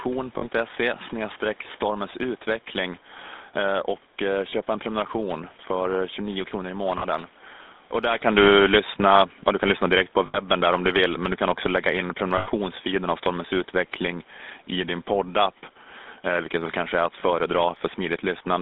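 Throughout, the GSM full-rate codec gives the speech a buzzy, gravelly roughness within a band of about 250 Hz to 3.7 kHz, consistent with 13 kbps coding. Unlike plain band-limiting, the roughness sits in the voice itself.

Lost GSM frames appear at 0.38 s, 4.5 s (after "utveckling eh och eh", before "en prenumeration för"), 6.98 s (after "kronor i"), 10.26 s, 12.38 s and 17.2 s (after "väl kanske är att"). Each lasts 20 to 80 ms. The decoder repeats the last good frame, producing a brief metallic ring rather than a silent dropout.

Just after the talker shifts position around 8 s, automatic gain falling lowers the level by about 5 dB from 8.25 s to 13.14 s. It differs from the talker's movement because the background sinks along with the voice.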